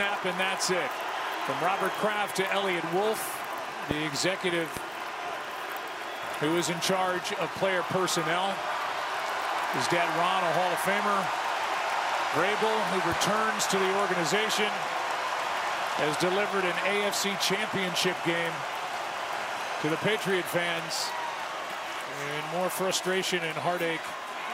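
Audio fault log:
3.91–3.93 s, 4.77–4.79 s and 15.99–16.01 s, loud pop: three single sharp pops, each about 20 ms long and peaking roughly 15 dB above the surrounding audio, which continues underneath. The likely cause is a sudden voltage step or pulse, such as from a plug, switch, static or driver glitch, shaped by the downstream circuitry. On a waveform each shows as a tall, narrow spike; on a spectrogram, a thin vertical broadband stripe.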